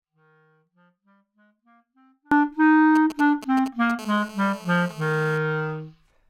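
An audio dropout to a faint residue is already under way at 0.00 s and lasts until 2.32 s. Only a faint trace of the sound survives, far below its normal level, which points to a likely break in the wanted signal while the path after it stayed live. The sound returns abruptly.

GSM signalling bursts run from 2.96 s to 3.92 s: a galloping dit-dit-dit of short 217 Hz buzzes, roughly 15 dB below the sound. A nearby 2G phone sending brief groups of radio bursts is being rectified by the audio circuitry.

GSM phone buzz follows from 3.99 s to 5.38 s: a steady, raspy 217 Hz buzz full of harmonics, about 21 dB below the sound and unrelated to it. It fits a phone in a call, transmitting continuously in bursts that the circuit rectifies into audio.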